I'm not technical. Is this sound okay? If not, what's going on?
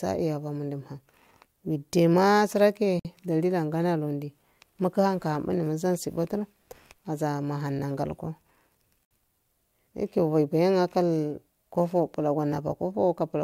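No. At 3.00 s and 9.05 s the speech stops briefly, for about 54 and 59 ms. These are gaps at a join of encoded pieces, recurring every 6 s. Unlike a dropout, nothing is lost: the speech resumes exactly where it paused.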